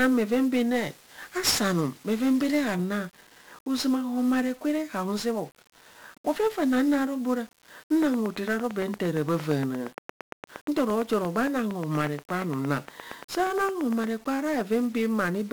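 Across the whole speech clip, everything sounds fuzzy and crackly, with a constant grainy hiss that swamps the treble and roughens every syllable. This is heavy 1-bit DFPWM compression damage. The codec keeps only one bit per sample, nudging an adaptive level up or down. At this quality that fits a rate of about 48 kbps. The coarse tracking leaves strong broadband quantisation noise sitting on top of the speech.

From 0.74 s to 2.74 s, just after "bheven bhen", the speech turns thin, bright and hissy at the edges, with sibilants pushed forward. This is pre-emphasis left on. The treble was lifted along a 50 µs FM-style curve, but the matching de-emphasis cut was never applied. High frequencies end up about 10 dB too strong at 10 kHz relative to 1 kHz, which tilts the whole sound toward sharpness for those two seconds.

From 8.03 s to 14.05 s, after "ro bee ora", a steady ticking runs over the speech and through its pauses. 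It is a train of clicks, roughly fifty near-identical pulses at a regular 8.65 per second, each standing out by roughly 10 dB above the signal. The evenly spaced, same-shaped pulses are most likely caused by interference from nearby equipment or a faulty connection or power supply injecting a spike at a fixed rate.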